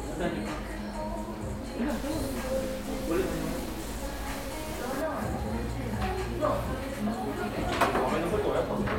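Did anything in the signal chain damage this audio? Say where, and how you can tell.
Yes. From 1.90 s to 5.01 s the sound turns harsh and buzzy, and the quiet stretches fill with a gritty noise floor. This points to a stuck bit, likely in the converter or a broken data line. One bit stays fixed at 0 or 1. About half the samples are then off by that bit's weight, a step of around -40 dBFS. Near silence the error flips with the waveform's sign, so pauses turn noisy.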